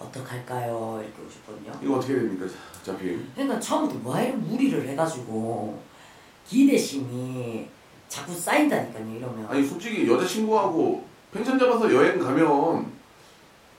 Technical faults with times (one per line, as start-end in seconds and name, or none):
none